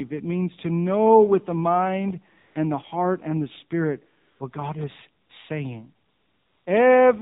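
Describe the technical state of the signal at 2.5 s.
At 2.5 s the real background drops out and a smooth, even hiss takes its place from 2.40 to 2.56 s, about 160 ms, before the original signal returns. This is AMR comfort noise: the sending phone judged the talker silent and stopped transmitting speech frames, so the receiver filled the gap with synthetic noise built from a rough estimate of the background level and spectral shape, producing a switch in texture at both edges.

Running through this moment, as through the whole speech clip, the voice is band-limited and plainly buzzy, with nothing above 4 kHz and a synthetic, vocoded character. That is the AMR narrowband mobile codec at work: it samples at 8 kHz and rebuilds speech from a vocal-tract model excited by sparse pulses in each 5 ms, and the degree of damage points to a low mode around 7.4 kbps.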